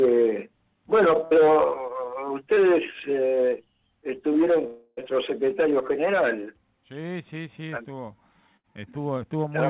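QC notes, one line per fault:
1.25–1.34 s and 8.57–8.67 s, burst of packet loss: In each case a run of consecutive packets was lost or arrived too late to be played. The receiver continued the last sound for about 60 ms at 1.25 s and 68 ms at 8.57 s, fading it as a held buzz or hiss, and then jumped ahead. About 60 ms of real audio is missing at each point, heard as a brief frozen, fading stretch followed by an abrupt resumption.
2.54–2.60 s, short concealed packet loss: A gap of about 30 ms never reached the decoder in time. Concealment extrapolated the preceding sound for about 24 ms, pitch-based if voiced and shaped noise if not, then cross-faded back into real audio. The result is a short smear or wobble. The sound here is band-limited to 4 kHz, which fits a narrowband G.711-type call codec.
4.67–5.00 s, long network dropout: The sound freezes into a decaying buzz or hiss lasting about 304 ms, ending in roughly 10 ms of silence before the audio resumes further on. 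About 300 ms of content is absent. This is likely a stall in delivery, with no packets arriving over that stretch, so the receiver could only extend and fade the last sound until it ran out.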